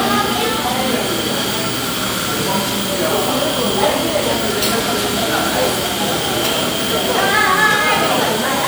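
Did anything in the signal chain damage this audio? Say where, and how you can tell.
Yes. There are repeated frames at 2.21 s, a storage or codec-stream fault. A 52.2 ms block plays twice, heard as a brief stutter. The length fits a pair of compressed frames written twice, adding 52.2 ms.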